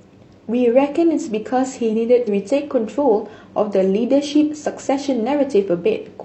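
At 2.23 to 2.29 s the speech is briefly broken: damaged data in a compressed stream, which made the decoder misread frames and lose sync.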